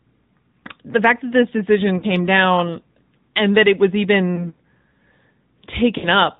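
AMR narrowband mobile codec damage runs through the whole speech clip, and it is plainly audible. Everything above 4 kHz is missing, so the sound is dull and telephone-like. The codec rebuilds each 20 ms frame from a vocal tract model excited by a few pulses, which gives the voice a buzzy, synthetic edge. The degree of coarseness fits the mid-rate mode of AMR-NB, around 10 kbps.

Lost AMR speech frames first appear from 1.98 to 2.04 s, a gap of 40 ms that fits two dropped 20 ms frames. Those frames failed their checks, so the decoder filled the gap by repeating the last good pitch and vocal tract settings at falling gain. The result is a short smeared dip, with the sound briefly stretched and softened. A second loss from 5.98 to 6.06 s covers 60 ms, fitting three frames, and it produces a longer drawn-out fade.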